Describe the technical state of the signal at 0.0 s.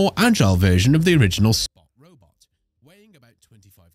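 At 0.0 s the signal is intact, with no audible technical fault.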